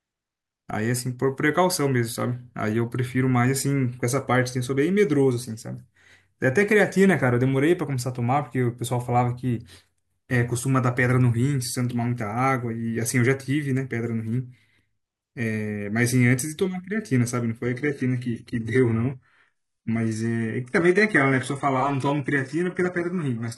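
At 17.63 s the speech switches abruptly, with no gap, to an adaptive stream at a lower bitrate, and it stays there until the end at 23.57 s. A slowed connection made the player fall back to a leaner encoding; the sound points to a drop from about 96 kbit/s AAC to a 12 kbit/s HE-AAC version. The treble goes dull and codec artefacts thicken. On a spectrogram, energy above 11.4 kHz ends in a hard horizontal edge from 17.63 s onward, while the waveform shows no break.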